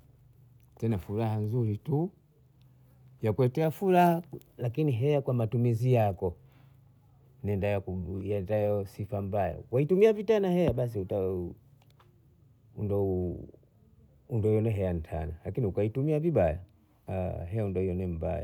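No technical faults can be heard anywhere in this speech recording. Nothing in the signal calls for a timestamp or a diagnosis.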